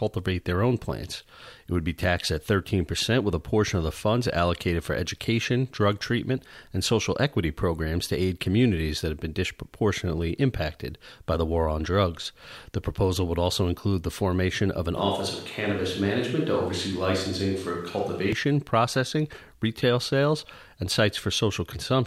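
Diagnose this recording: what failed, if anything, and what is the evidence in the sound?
The close microphone likely dropped out between 14.97 and 18.33 s, at the analogue wiring stage, leaving only a switch to a distant microphone. The speech turns roomy and hollow at 14.97 s. Bass thins out. Level stays about the same. Room noise rises to roughly 35 dB below the speech. At 18.33 s the close sound returns just as abruptly. That hard edge shows a change of pickup, not a gradual movement. A far microphone captures more reflections and less low end.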